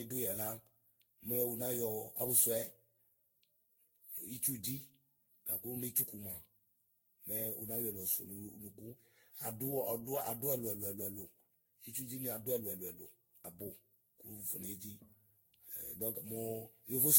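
The speech has most likely been through generation loss, re-encoded around fifteen times with a lossy codec at 62 to 69 kbit/s, each pass requantising on a shifted frame grid. Throughout, it sounds swirly, hollow and smeared, with blurred consonant attacks and nothing above 16.6 kHz.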